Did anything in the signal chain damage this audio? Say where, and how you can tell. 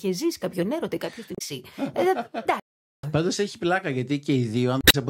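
Yes. Twice the speech breaks up briefly, from 1.35 to 1.42 s and from 4.80 to 4.95 s. This is damaged data in a compressed stream, at the codec or storage stage. Corrupted bytes made the decoder misread those frames, lose sync and hunt for the next valid frame header.

From 2.60 to 3.03 s the speech stops in mid-flow, leaving about 437 ms of silence before the sound returns. This is a playback stall, most likely at the playback buffer or driver stage: the player ran out of data or its thread was blocked.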